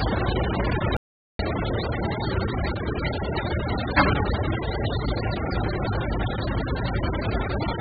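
From the very start the whole clip has a dull, muffled cast, with nothing above about 5 kHz, and it keeps that choked character all the way through. That's heavy AAC compression damage, likely from AAC-LC squeezed down to something like 8 kbps. At that rate the encoder drops the top of the spectrum and starves the remaining bands, so anything sustained comes out smeared, with a watery, fizzy warble riding on it.

Then at 0.97 s the audio just vanishes until 1.39 s, a gap of about 0.43 s. That's an audio dropout to silence. The gap is silent, with no room tone or noise floor, so it sounds like a hard cut rather than a quiet stretch. The likely cause is the input briefly disappearing, through a lost connection or a mute, while the recorder kept writing silence. Whatever happened in that window is gone.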